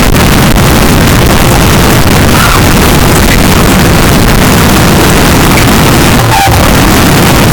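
From the first moment to the end, the speech is buried under a loud, harsh, buzzing distortion, and pauses are as loud as the talking. The likely cause is signed and unsigned mixed up, which fits 16-bit samples read with the top bit flipped, so every zero crossing leaps across the full range. Unlike clipping, which flattens only loud peaks, this ruins near-silent moments too. Unlike a byte-order swap, the distortion tracks the waveform's crossings.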